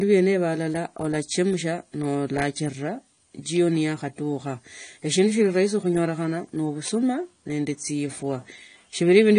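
AAC compression runs throughout the speech, from start to finish. Nothing sounds above 10 kHz, and the clear damage fits a low bitrate around 32 kbps. The likely cause is AAC-LC dropping and coarsely coding spectral detail, leaving a dull, smeared sound with fizzy sibilants.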